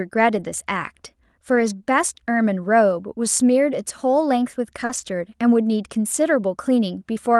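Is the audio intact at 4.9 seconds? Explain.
No. From 4.85 to 4.91 s, about 40 ms of the call arrived too late for the decoder, a short concealed packet loss. The receiver bridged the hole by extending the preceding sound, following its pitch where it was voiced and using shaped noise where it wasn't, then blended back into the real signal. You hear a brief smear or wobble right at that point, and a short consonant there may simply disappear.

Overlapping it, from 4.89 to 5.03 s, is a lost packet rebuilt from error correction. The losses were bridged by low-bitrate backup copies carried in the following packets, the in-band forward error correction this Opus call path uses. There is no gap, but about 80 ms of audio, which suggests several separate packets, plays from those lower-quality copies. That stretch sounds rougher and noisier than the audio around it.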